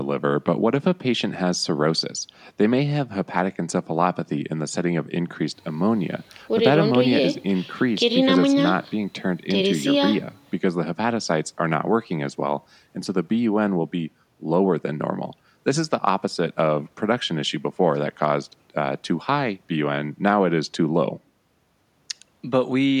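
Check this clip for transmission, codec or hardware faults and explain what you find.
No transmission, codec or hardware faults are audible anywhere in the speech.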